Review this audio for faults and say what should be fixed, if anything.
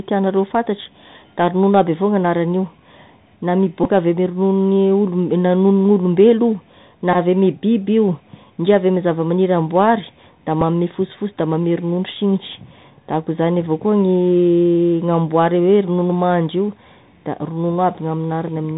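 The whole clip carries the Bluetooth CVSD headset codec sound. Nothing gets through above 4 kHz, s sounds come out scratchy, and a grainy hiss sits under the speech. That's the one-bit up/down coder with its adaptive step failing to keep up with fast, bright sounds, which fits a 64 kbps CVSD link. Preventing it comes down to the link itself: switch the headset to a wideband profile (mSBC or LC3) or record from a wired mic.

There are Bluetooth headset packet repeats at 3.84–3.86 s and 7.13–7.16 s. Each is a short buzzy stutter near 267 Hz, where the decoder replays the last good packet every 3.75 ms, which points to roughly four packets lost (about 15 ms) each time. At 10.61 s there's just a single repeat, heard as a small tick. To prevent these, keep the headset close to the phone and clear of 2.4 GHz interference so packets stop dropping.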